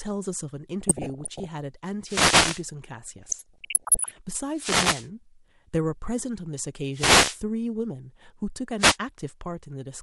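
Throughout, the audio was most likely squeezed through MP2 compression at a low rate, which fits something near 80 kbps. Too few bits for the 32 sub-bands leave the upper bands switched off or flickering, so the speech sounds dull, with a granular, gurgling edge that is plainly audible.

From 0.81 to 1.50 s, and again more heavily from 3.18 to 4.18 s, bit errors slipped past error correction into the MP2 data. This is DAB burbling: corrupted scale factors and samples make single sub-bands jump in level frame by frame, laying muddy bubbling and squelchy chirps over the speech. The second burst is denser, pointing to an error rate of roughly one percent.

At 2.03 to 2.65 s, 4.55 to 5.08 s, 6.92 to 7.39 s and 8.78 to 8.97 s, the wireless microphone's FM signal faded as reflections cancelled. Each of these wireless microphone noise hits brings up receiver noise as a short swish or burst of static across the speech.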